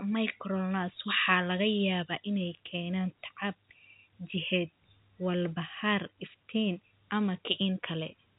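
Speech audio with no technical faults present.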